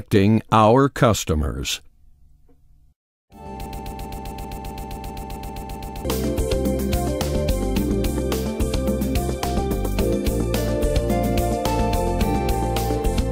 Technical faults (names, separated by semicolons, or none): broken-record loop